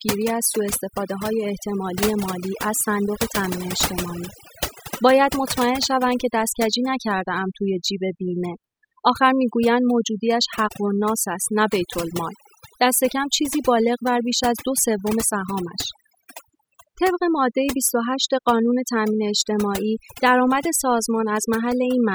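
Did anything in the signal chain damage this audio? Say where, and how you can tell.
Yes. A noise reduction stage in the call processing was set far too aggressively, an overdone noise removal that runs for the whole clip. It clamps any frequency band sitting near its noise estimate down toward nothing, so the background collapses into near silence dotted with twinkling, chirpy specks. The quieter parts of the speech fall under that threshold as well and get carved away.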